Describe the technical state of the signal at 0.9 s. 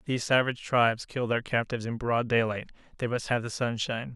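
At 0.9 s the speech signal is intact, with no audible fault at that point.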